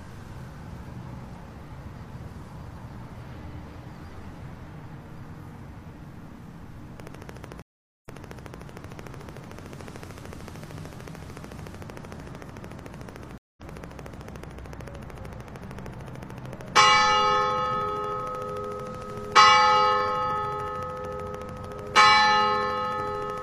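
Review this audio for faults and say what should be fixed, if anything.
A train of clicks runs from 7.0 to 23.4 s: about 200 evenly spaced clicks at 13.4 per second, peaking about 5 dB above the sound, likely from equipment interference or a faulty connection or power supply.

Stream reconnects occur at 7.62 s and 13.38 s. The first leaves 417 ms of silence and then replays 604 ms of audio. The second leaves 194 ms of silence and skips ahead roughly 0.2 s.

To prevent these, shield or relocate the recording interface away from nearby equipment, and give the stream a stable connection with enough client buffering to ride out brief dropouts.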